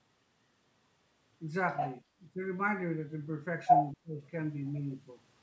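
From 1.78 to 1.96 s, a second voice cuts in at about the same level as the talker: the other side's voice leaking through, likely loudspeaker echo that the echo canceller failed to remove. On a spectrogram, a second set of harmonic striations overlaps the talker's own and stops below the 8 kHz ceiling that the call's microphone processing sets on the whole clip.

At 2.34 to 2.40 s the talker briefly sinks by up to about 10 dB over roughly 70 ms. This is speech suppressed in double talk, with the canceller likely turning down both voices at once. It shows as a short notch in the waveform envelope.

From 3.66 to 3.93 s the leak returns much louder, well above the talker, and its bright striations dominate the spectrogram. From 3.94 to 4.21 s the suppression that follows is deep, up to about 20 dB across roughly 300 ms. The waveform thins to a narrow band, and the voice sounds choked off before recovering.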